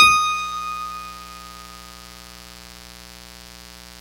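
Mains buzz runs from start to finish beneath the music, sitting roughly 20 dB under it. Sharp switching spikes from the 60 Hz supply, arriving twice per cycle, leak into the signal path and spread harmonics up into several kHz, giving a steady, raspy buzz.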